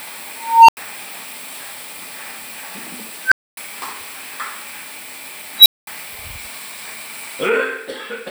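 An unstable filter fires at 0.36 s, 3.24 s and 5.58 s. Its recursion runs away, so a tone near 1 kHz, 1.5 kHz, then 4 kHz swells over 0.32, 0.08 and 0.08 s, clips, and drops out for 0.09, 0.26 and 0.21 s. On a spectrogram each is a brightening horizontal line that ends in a blank gap. On the waveform the envelope balloons until it clips, then goes flat.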